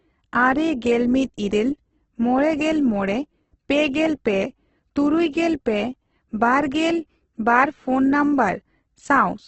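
Opus compression, throughout: grainy, rough speech with nothing above 8.2 kHz, likely a music-mode Opus encoder noise-filling starved bands, fitting a bitrate near 12 kbps.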